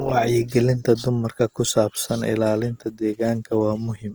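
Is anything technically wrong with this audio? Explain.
Yes. There is audible Opus compression throughout the speech, which fits a low-bitrate encode of around 24 kbps in Opus's music-oriented CELT mode. With few bits to spend, the encoder preserves each frequency band's overall energy but fills the detail by copying lower bands upward or inserting noise. The result is a rough, grainy texture on the voice rather than swirling. The bandwidth stays full, reaching about 20.2 kHz, so the damage is textural rather than muffling. A lossy encode at that rate is the likely cause.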